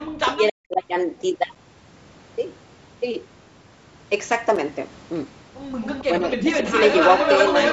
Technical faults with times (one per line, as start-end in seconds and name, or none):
0.22-0.82 speech suppressed in double talk
1.55 gap between chunks
4.56 gap between chunks
5.81-6.02 echo leak
6.03-6.66 speech suppressed in double talk
6.73-7.72 echo leak